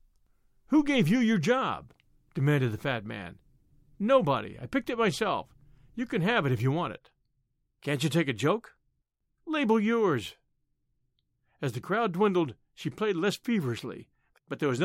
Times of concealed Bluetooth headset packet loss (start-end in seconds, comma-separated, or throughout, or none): none